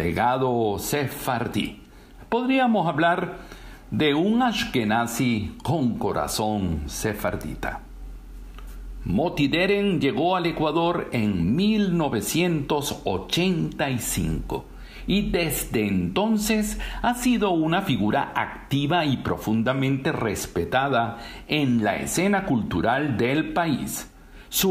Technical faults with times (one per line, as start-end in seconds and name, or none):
none